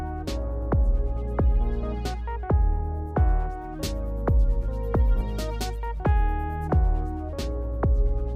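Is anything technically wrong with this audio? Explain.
Yes. From 3.78 s to 6.73 s there is pre-emphasis left on: the treble lift of a CD-style 50/15 µs emphasis curve stays in place without the matching de-emphasis cut. Highs sit about 8 dB above 1 kHz at 10 kHz, so the sound turns thin, bright and sibilant.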